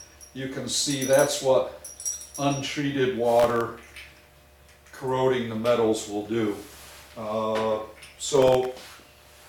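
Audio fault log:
3.40–3.61 s, processor overload crackle: a short burst of crackle where the processor kept missing its deadlines. Each miss dropped a tiny buffer, well under a millisecond, leaving a hard-edged gap of silence. About ten of those in quick succession make the sound tear.
8.36–9.13 s, processor overload crackle: the same thing over a longer stretch, with about twenty dropped buffers chopping silent holes into the sound until the load eases.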